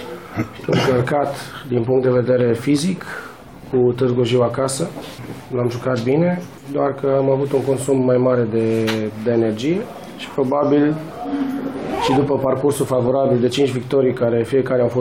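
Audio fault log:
No faults detected in this clip.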